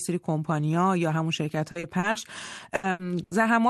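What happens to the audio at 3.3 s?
At 3.23 s there is a burst of packet loss lasting to about 3.34 s. A run of audio never arrived in time, so the receiver filled the gap by extending the last received sound for about 80 ms while lowering its level, which is heard as a smeared, fading tail. Playback then picks up again later than it should, with roughly 80 ms of the original audio skipped.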